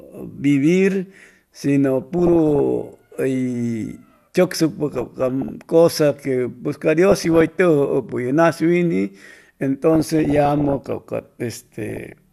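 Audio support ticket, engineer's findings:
DAB burbling on the speech at 2.02–2.59, 4.94–5.50, 7.12–7.57, 9.94–10.92 and 11.89–12.13 s. Short noise blips in single sub-bands. Weak DAB reception, bit errors around 1 percent or below getting past error correction and corrupting MP2 scale factors, so single sub-bands jump in level for up to a frame.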